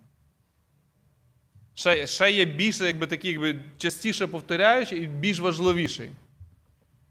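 Audio missing between chunks causes brief skips at 1.94 s, before "ще є більше", at 3.90 s after "такі якби", at 4.88 s, and at 5.86 s after "і більш". Each loses about 20 ms, with the edges joined directly. The one-second spacing points to likely chunk boundaries.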